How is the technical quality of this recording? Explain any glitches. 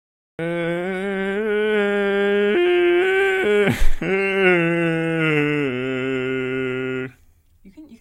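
The recording has one clear glitch, at its very beginning. From 0.0 to 0.39 s there is digital silence, then the music appears abruptly at 0.39 s already mid-sound. This is a cut-off start: capture began late, so the music's natural attack was never recorded. Unlike a dropout, nothing precedes the silence, and unlike a fade-in, the level jumps straight to full.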